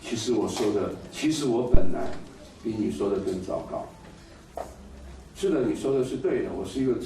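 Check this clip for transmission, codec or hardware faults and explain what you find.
One hardware fault stands out. From 1.75 to 2.20 s there is a phantom power thump: a supply switching on or off on the live input sends a voltage step through the coupling capacitors. You hear it as a deep low thump peaking near about -4 dBFS and decaying over roughly 100 ms. On the waveform it appears as a large one-sided swing, and on the spectrogram as a dark low-frequency blob.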